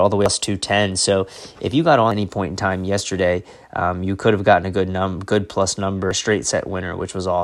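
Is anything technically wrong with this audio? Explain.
Yes. Damaged data in a compressed stream causes brief glitches at 0.26, 2.12 and 6.11 s in this speech. Corrupted bytes make the decoder misread frames and lose sync. It then hunts for the next valid header. Each event is a short blip.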